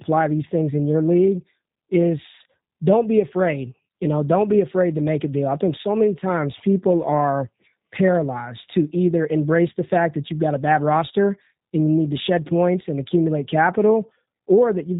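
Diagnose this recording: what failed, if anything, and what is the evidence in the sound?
The codec stage failed: across the whole take the speech has that rough, buzzy G.729 character with nothing above 4 kHz, which fits an 8 kbit/s G.729A call leg.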